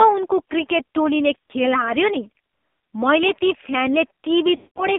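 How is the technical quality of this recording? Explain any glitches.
The recording has poor technical quality, with narrowband, heavily coded mobile speech and two dropouts from lost frames.

AMR narrowband mobile codec, throughout: the speech is confined to roughly 200 Hz to 3.6 kHz and sounds buzzy and synthetic. A pulse-driven vocal-tract model at a low bitrate, which fits AMR-NB near 5.9 kbps, produces that texture. A plain low-pass filter would dull the sound but not add this buzz.

Lost AMR speech frames: at 1.46 to 1.51 s there is a brief dip and warble, which points to a single lost frame. From 4.56 to 4.84 s the sound smears and fades out, which fits about ten lost frames. Each time the decoder repeated its last pitch and vocal-tract settings at falling gain. A packet-loss gap would cut out abruptly, but these decay gradually.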